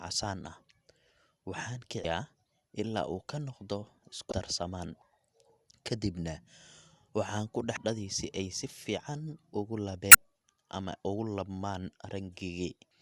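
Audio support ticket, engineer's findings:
Brief glitches, each about 35 ms, at 2.01, 4.29, 7.74 (after "waxaan ku"), 10.11 (after "si fiican ugu") and 12.88 s. Damaged data in a compressed stream: the decoder misreads corrupt frames and resyncs.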